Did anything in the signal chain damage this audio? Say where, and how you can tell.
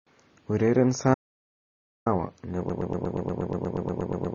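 Yes. The whole clip sounds dull and smeared, with a watery, fizzy edge on sibilants and sustained vowels, and nothing at all above 7 kHz. That is the likely fingerprint of AAC compression at the codec stage. An AAC-LC encoder starved of bits drops its cut-off and quantises the remaining bands coarsely, which fits a bitrate around 24 kbps. The damage is plainly audible throughout the speech rather than subtle.

From 1.14 s to 2.06 s the speech cuts off mid-flow and the gap is silent, with no room tone or noise floor underneath, for about 0.92 s. That is an audio dropout to silence. The likely cause sits at the capture or driver end: the input was lost, through a disconnect or mute, while the recorder kept writing silence, so whatever was spoken in that stretch is gone.

From 2.70 s to the end of the clip a fragment of about 119 ms repeats identically, back to back, roughly 14 times, giving a stuttering broken-record loop that never recovers. 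The exact repetition points to a playback or streaming buffer that likely stalled and kept resending the last block it held instead of fresh audio. Everything that should have followed 2.70 s is lost.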